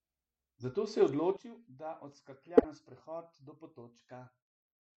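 At 1.37 s there is a sudden gain jump. The speech drops by about 12 dB in a single step, and the background noise drops with it. There is no fade. The level stays low until the end. Voice and noise fall together, so this is not a change in how someone spoke. The likely cause is a digital gain setting or bit shift applied instantly, with no ramp to smooth it.

From 2.57 to 2.65 s, a corrupt frame is decoded. The burst lasts about 70 ms. It sounds like a chirp, squeak, blip or burst of noise laid over the speech. It peaks near -10 dBFS. Damaged bits in the compressed data were read as wrong gains or codes. The decoder played them anyway, spreading energy into the wrong frequencies across several consecutive frames.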